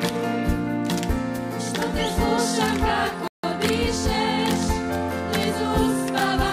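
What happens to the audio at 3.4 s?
A rebuffering stall runs from 3.28 to 3.44 s, so 3.4 s falls inside it. The player has used up all the audio it had downloaded and has to wait for more data before it can continue. The sound drops abruptly into silence for about 0.16 s, then picks up at exactly the point where it stopped. Nothing is skipped or repeated; the pause simply adds 159 ms to the playback time.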